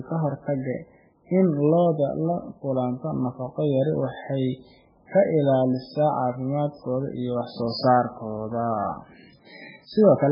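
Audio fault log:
Throughout, MP3 compression: the speech sounds dull and watery, with nothing above 5.2 kHz and a swirly, unstable texture from heavy codec damage. The likely cause is an encoder starved of bits, which fits roughly 8 kbps, cutting the treble and switching weak frequency lines on and off between frames.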